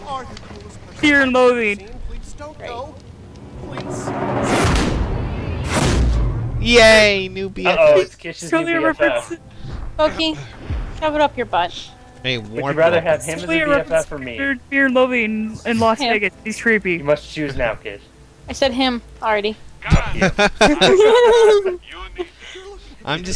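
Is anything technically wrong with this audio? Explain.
No, nothing technically wrong can be heard in this audio. Nothing in it points to a problem in how it was captured, carried or reproduced.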